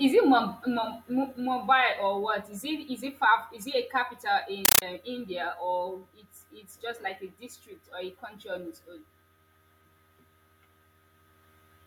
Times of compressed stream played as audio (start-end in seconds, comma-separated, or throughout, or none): 4.65-4.82